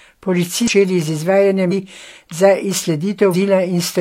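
At 0.65 s, 1.68 s and 3.30 s, the speech breaks into a brief chirp or squawk. Each lasts about 50 to 60 ms. This is damaged data in a compressed stream. The decoder misreads the corrupted frames, loses sync, then locks onto the next frame header.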